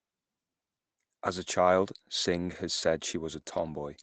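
From 2.51 to 2.57 s, just before "has said", a lost packet rebuilt from error correction briefly roughens the speech. About 40 ms of audio, which fits two lost 20 ms Opus packets, was decoded from the low-bitrate backup copies carried in the following packets, so it sounds grainier and noisier than its surroundings. Unlike ordinary loss concealment, there is no gap, muting, or stretched, repeated tone. The speech keeps moving, only coarser, within the call path's 8 kHz band limit.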